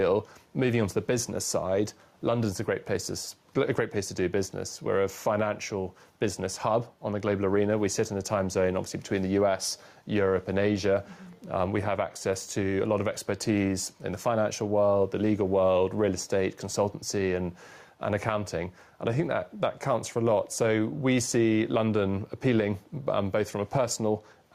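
There's gain pumping across the whole clip. The gain ducks by roughly 5 dB under each loud sound, squashing loud and soft parts together. The cause is likely input gain set far too hot, with a fast limiter clamping every peak.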